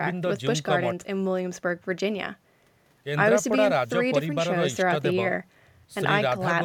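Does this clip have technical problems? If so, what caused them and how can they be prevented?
No, no technical faults here.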